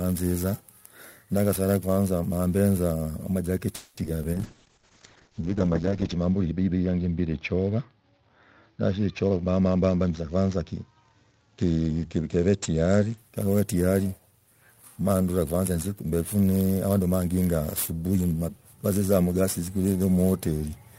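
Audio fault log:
Throughout: sample clock jitter. A hiss and roughness ride on the speech, growing on loud and bright passages and disappearing in pauses. Timing errors of a few microseconds in an unsteady converter clock produce error roughly 20 dB below the signal, largest where the waveform changes fastest.
3.75–3.99 s: call audio freeze. The last sound is held as a fading buzz for about 220 ms, then speech resumes where it stopped with nothing lost. The likely cause is delayed packets draining the jitter buffer, which adds about 220 ms of delay to the call.
4.03–4.06 s and 4.22–4.25 s: short concealed packet loss. Each 30 ms spot has a brief smear or wobble, and 20 ms of real audio is missing from each. The receiver bridged these holes by extending the preceding sound before blending back into the received signal.
4.35–13.24 s: call bitrate drop. The speech turns coarse and watery, and the highs are cut above 8 kHz instead of reaching 20 kHz. 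This fits the encoder dropping from about 32 to 7 kbps, with the worst stretch lasting 1.77 s before quality recovers.
9.25–10.31 s: jitter buffer speed-up. Speech runs at 120% speed with unchanged pitch and sounds hurried. To shrink a backlog of buffered audio, the receiver cut many pitch-period-length pieces, removing roughly a fifth of a second in total.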